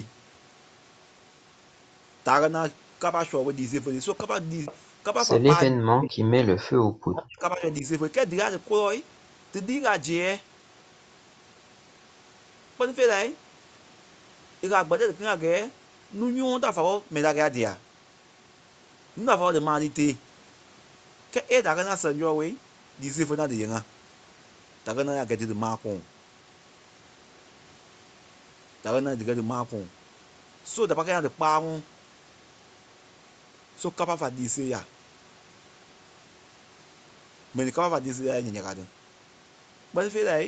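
Speech heard over a call, with echo-canceller trouble in three forms. From 4.65 to 4.77 s there is an echo leak: a faint copy of the far side's sound, about 20 dB below the speech, arrives 478 ms late. The likely cause is a loudspeaker echo the canceller failed to remove. That late, separate repeat is what marks it as echo rather than room reverberation, which would trail directly off the sound. Speech is suppressed in double talk from 5.7 to 6.15 s and again from 7.08 to 7.85 s. The talker's own voice sinks by roughly 30 dB and then roughly 35 dB, likely because the canceller confused it with echo while both sides spoke. Because the voice itself collapses, this is not gating. At 6.72 to 6.8 s the background is gated by the echo canceller. The room noise drops by about 8 dB for a moment.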